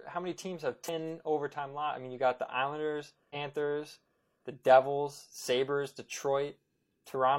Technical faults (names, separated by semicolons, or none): damaged data in a compressed stream